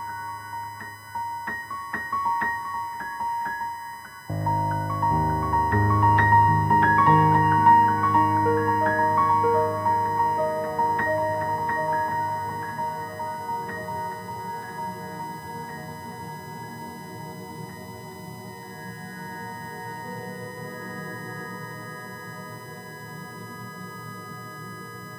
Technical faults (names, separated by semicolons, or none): USB whine